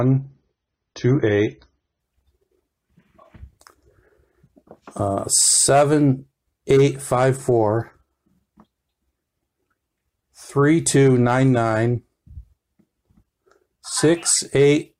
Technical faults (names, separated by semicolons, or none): adaptive stream starting at a low bitrate